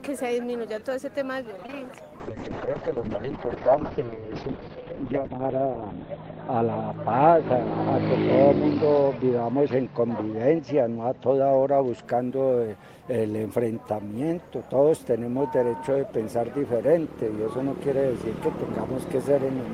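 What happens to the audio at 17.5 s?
Nothing goes wrong at 17.5 s; the audio there plays through intact, with no audible fault.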